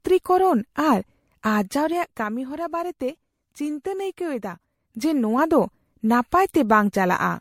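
Repeated MP3 re-encoding, likely around seven passes at what sounds like about 67 kbit/s, causes generation loss throughout: swirly, hollow smearing, blurred attacks, and nothing above 16.5 kHz.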